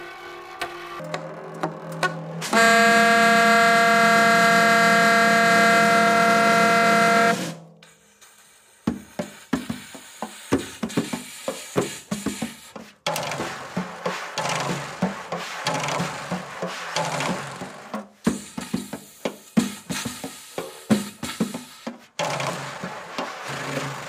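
From 0.00 to 1.00 s, the audio shows planar audio read as interleaved. Each block stores all of one channel's samples followed by all of the other's, but the reader treats them as alternating left-right pairs. Each block therefore plays as two half-length, double-speed segments. The blocks here are short, about 5.33 ms, which fits a 256-sample block. So instead of an octave jump, the result is a robotic buzz repeating at 188 Hz.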